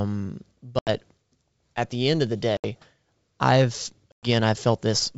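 Packet loss on an ADPCM call cuts hard-edged silent holes at 0.79–0.90 s, 2.57–2.65 s after "the end of the", and 4.12–4.27 s (80, 70 and 110 ms lost). Unlike a plain dropout, distortion follows each hole because the G.722 decoder's predictor and step size must resynchronise.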